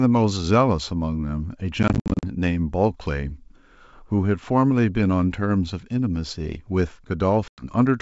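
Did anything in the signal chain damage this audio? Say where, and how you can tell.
Yes, in the network stage: packet loss on an ADPCM call. Between 1.83 and 2.24 s about 220 ms drops out as hard-edged silent holes scattered over 400 ms, the longest 60 ms, and 100 ms is lost at 7.48 to 7.64 s. After each hole the audio returns slightly distorted, then settles within some tens of milliseconds while the G.722 decoder's predictor and step size catch up with the sender's.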